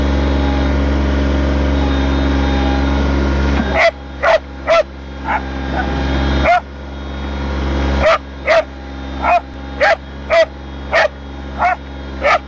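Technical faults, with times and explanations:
No technical faults are audible in the signal, which holds steady and continuous with nothing interrupting or distorting it at any point.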